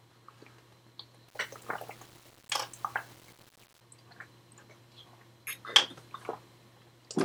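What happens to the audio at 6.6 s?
Nothing goes wrong at 6.6 s; the audio plays through that moment intact, with no dropout, click or distortion.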